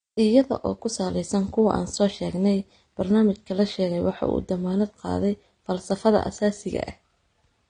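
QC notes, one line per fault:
Throughout: low-bitrate audio saved at a high bitrate. The speech has nothing above 9.7 kHz, a hard ceiling that leaves it dull and closed-in, with the artefacts of low-bitrate coding. This is likely an earlier low-bitrate encode, consistent with AAC at around 32 kbit/s, later re-encoded as MP3 at a rate that fits 192 kbit/s. The larger second file keeps the first codec's cut-off and artefacts but cannot restore the discarded detail.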